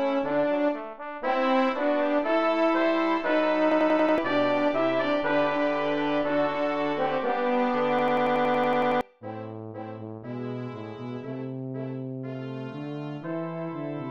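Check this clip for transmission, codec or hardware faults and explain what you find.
Two system hang loop events turn up, one at 3.72 to 4.18 s and a longer one at 7.99 to 9.01 s. In each, the machine stalled while the sound hardware kept replaying its ring buffer, so a 93 ms slice repeats exactly (5 times, then 11), which fits a 4096-sample buffer. At 10.8 Hz, that comes across as a machine-gun stutter. Roughly half a second of audio is lost at the first event and about a second at the second.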